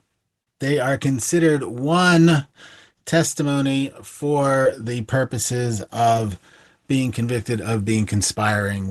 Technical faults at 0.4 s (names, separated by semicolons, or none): short concealed packet loss